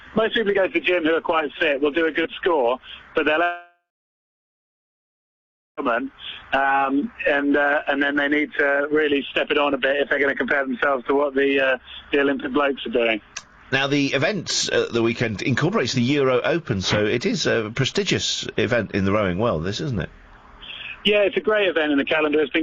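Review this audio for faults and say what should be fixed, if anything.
A long network dropout, likely a stalled stream, loses 3.43 to 5.80 s: a short fading buzz, then about 2 s of silence. A more reliable link with redundancy or retransmission would prevent this.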